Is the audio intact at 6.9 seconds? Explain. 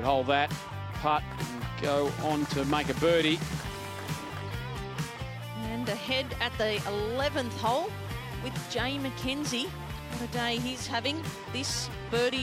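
No. From 5.15 to 11.10 s the digital radio is blending to analogue FM over a 477 ms cross-fade, so at 6.9 s hiss sits roughly 30 dB down and the level drops about 1 dB.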